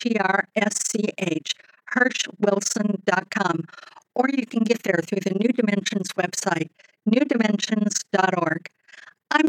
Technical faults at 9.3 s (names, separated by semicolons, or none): overlap-add ripple